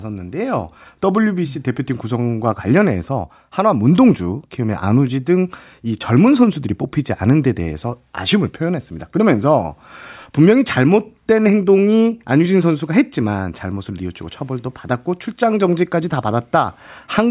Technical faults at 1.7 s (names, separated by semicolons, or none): none